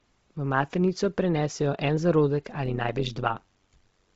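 The whole clip has the breathy, grainy edge of heavy Bluetooth LC3 compression, likely at about 24 kbps in short 7.5 ms frames. Then, from 2.66 s just after "maternico prenesejo en zarodek" to the end, overlap-add ripple appears. Badly summed frames make the level pump by about 11 dB, roughly 100 times a second, so the speech comes out as a metallic buzz with extra tones around each note.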